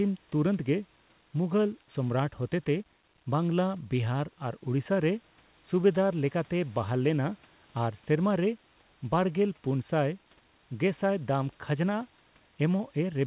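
No technical faults are audible.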